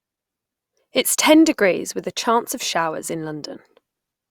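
Two device clocks likely disagree by a few hundred parts per million, causing clock drift buffer slips: about four clicks at 0.96 s intervals, 0.82 to 3.68 s.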